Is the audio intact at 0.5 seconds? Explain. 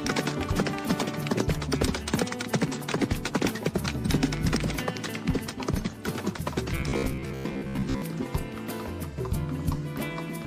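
Yes, at 0.5 seconds the audio is intact, with no fault to be heard at that moment.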